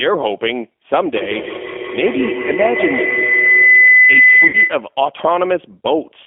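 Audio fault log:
throughout: G.729 codec. The sound is narrowed to about 250 Hz to 3.4 kHz and rebuilt from a coarse filter and pulse model, which fits an 8 kbit/s stream, so it is rough and synthetic. A spectrogram shows a hard ceiling near 3.4 kHz, nothing below 250 Hz, and smeared, blotchy harmonics.
1.15 to 4.91 s: feedback howl. A microphone-to-loudspeaker loop adds level on every trip, so the repeats grow and narrow into a tone around 2 kHz. It pulses roughly every 150 ms and peaks about 5 dB above the speech. A spectrogram shows a bright horizontal line near 2 kHz, banded at that rate. The waveform envelope swells with it.
4.47 to 4.56 s: VoIP packet loss concealed by the speech codec. About 60 ms of audio went missing, which fits two lost packets. The decoder extended its last pitch and filter at falling gain, giving a brief, fading fill that is stretched from the last sound. Recovery is weak and distorted because each frame builds on the last. 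The waveform shows a short, decaying, overly regular stretch, and the spectrogram shows a flat, repeated pattern.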